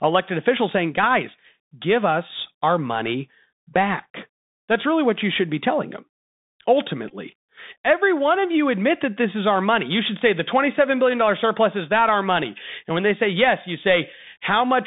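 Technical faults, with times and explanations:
Throughout: Bluetooth CVSD headset codec. The audio is confined to roughly 200 Hz to 3.7 kHz, with nothing above that. The coder sends a single up-or-down bit per sample and adapts its step size, which fits 64 kbps CVSD. Fast, loud high-frequency movement outruns the step, so sibilants come out scratchy and distorted. A grainy hiss sits constantly beneath the speech, and the codec damage is plainly audible.
7.09 to 7.14 s: Bluetooth headset packet repeated. Over about 38 ms, a total of 30 ms of audio goes missing, which fits roughly eight dropped voice packets. In each gap the chip decodes the previous packet again instead of producing silence. The repeats come in short bursts, the longest about 10 ms. Because they recur every 3.75 ms, each burst comes across as a brief rough buzz near 267 Hz rather than a clean dropout, and it ends once good packets resume.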